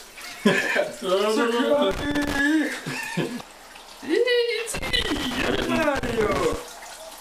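From 1.91 to 2.39 s, and again from 4.74 to 6.54 s, loose connector crackle breaks in. A worn or dirty contact makes and breaks as it shifts. This chops the signal into irregular, scratchy bursts. The second burst runs nearly two seconds.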